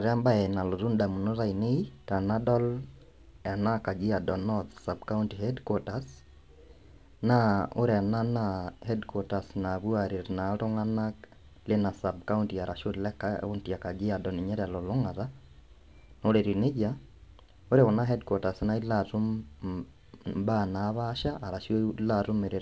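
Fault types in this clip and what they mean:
Nothing stood out on listening to this speech clip.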